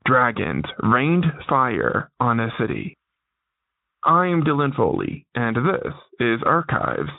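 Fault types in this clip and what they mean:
Nothing in this clip calls for a fault line; there's no problem here to flag.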